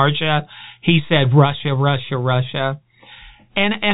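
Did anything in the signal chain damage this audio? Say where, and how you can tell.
No, nothing in the signal chain damaged this speech. The G.711 telephone coding is working as it should: the band stops at about 3.8 kHz and only a faint noise floor follows the speech level, which fits a standard 64 kbps mu-law line.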